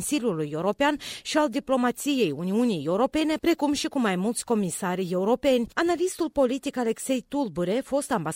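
No technical faults are audible anywhere in this audio.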